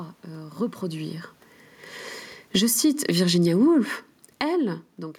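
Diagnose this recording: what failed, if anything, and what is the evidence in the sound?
The automatic gain control in the call-processing stage pulls the level down twice. From 2.4 to 3.37 s the speech and the room noise beneath it sink together by about 6 dB over roughly a second, and again from 4.26 to 4.56 s by about 6 dB in a quicker dip. The background falls in step with the voice, so the drop comes from a gain stage reacting to input it judged too loud, not from the acoustics.

Automatic gain rising follows each fall, overlapping it, so the control is hunting rather than settling. From 2.72 to 3.9 s the level swells back by about 4 dB, speech and room noise rising together. From 4.47 to 4.91 s it lifts by about 4 dB after the input itself drops by about 16 dB around the talker moving away near 4.5 s. The gain only partly makes up that loss, and the noise floor comes up with it.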